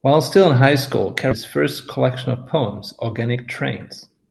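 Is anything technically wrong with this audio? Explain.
Yes, there are two. Right after "still in high school", at 1.31 to 1.33 s, there's a skip ahead. Roughly 0.7 s of audio was dropped, either lost in transit or thrown out when the jitter buffer overflowed, and playback butts the two sides together with no gap, so the sound lurches forward.

From 3.07 to 3.48 s there's a jitter buffer speed-up. The buffer had built up more delay than it wanted, so the receiver snipped out short pitch-period-sized slices, around 70 ms in total. That runs the audio at about 114% speed with the pitch unchanged, so it sounds briefly rushed.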